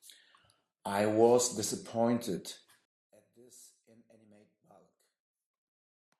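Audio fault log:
2.85–6.2 s, one channel inverted. At 2.85 s the speech suddenly drops by about 28 dB and stays faint to the end of the clip. The voice turns faint and distant. The likely cause is reversed polarity on one stereo channel. When the two channels are summed to mono, the centred voice cancels almost completely. Only the small difference between the channels survives, heard as this weak remnant.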